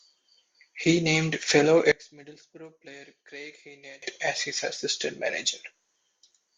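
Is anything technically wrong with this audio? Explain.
Yes. From 1.92 to 4.02 s the speech suddenly drops by about 23 dB to a faint copy, then returns at full strength. The likely cause is one channel inverted: with one side's polarity reversed, everything common to both channels cancels once they are summed to mono, leaving only their small differences. Unlike a dropout or a plain gain drop, the sound doesn't go silent or simply quieter; a faint residue remains.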